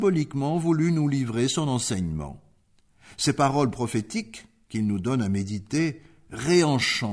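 Nothing here stands out as a technical fault; the sound runs along without any glitch, dropout or other problem that the ear catches.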